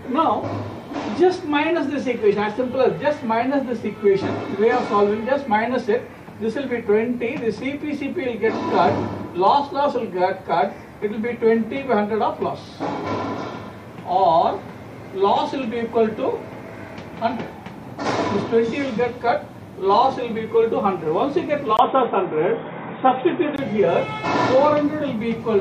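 At 21.77 s there's a brief gap of about 20 ms, then the audio goes dull and boxy with nothing above 3.8 kHz and a faint new noise floor, at much the same level, until 23.58 s. That's likely the input switched to a poorer device.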